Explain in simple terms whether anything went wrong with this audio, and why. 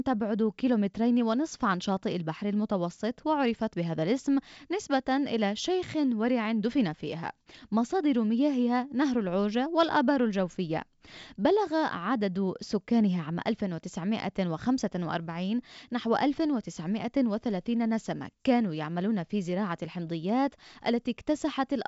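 Nothing went wrong here: the speech comes across as ordinary wideband phone audio, the kind that keeps sounds clear up to about 7 kHz, with at most a faint touch of hiss in the top end.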